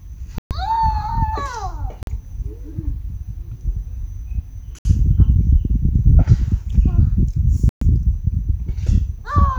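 A likely Bluetooth stall, where held-up packets let the receiver's buffer run dry, pauses playback four times: 0.38–0.51 s (125 ms), 2.03–2.07 s (43 ms), 4.79–4.85 s (65 ms) and 7.69–7.82 s (122 ms). Each drops abruptly to silence, then resumes.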